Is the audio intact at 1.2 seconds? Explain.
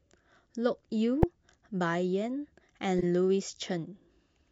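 No. At 1.22 s there is a corrupt frame muted: damaged compressed frames were rejected by the decoder and replaced with silence, leaving an abrupt hole of about 16 ms, which suggests several short frames. The waveform drops to near silence and the spectrogram shows a clean vertical gap. Timing is preserved.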